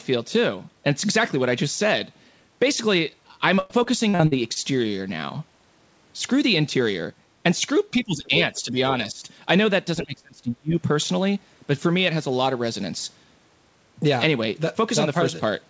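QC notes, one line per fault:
3.56–4.58 s, repeated packet loss (robotic sound): seven separate holes open in about one second of speech. The longest is 101 ms, and 280 ms goes missing in total. Each hole is patched by stretching the previous sound, so 27% of the span is synthetic fill. That repetition gives the choppy character. On a spectrogram, the harmonics turn flat and smeared over the patches and then jump at each splice. The waveform shows repeated, oddly regular cycles between the breaks.
7.91–8.32, 8.63–8.77, 9.13–9.23 and 10.04–10.76 s, speech suppressed in double talk: the talker's level sags in four places. The drops are about 15 dB in the first, about 10 dB in the next two, and about 30 dB in the last, which lasts around 0.7 s and nearly cuts the speech out. The likely cause is an echo canceller that could not tell the near voice from loudspeaker echo while both sides spoke, so it turned both down. 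The waveform envelope shows sudden pinches. On the spectrogram, the energy dims or thins in the upper part of the 8 kHz band.
8.54–8.62 s, other side's voice leaking through: a brief scrap of a second voice sits about 30 dB under the main speech for roughly 80 ms. It sounds faint. The likely cause is loudspeaker playback that the echo canceller did not fully remove from the microphone signal. On the spectrogram, a separate, weak set of harmonics appears that does not line up with the talker's pitch. The waveform shows only a slight low-level ripple.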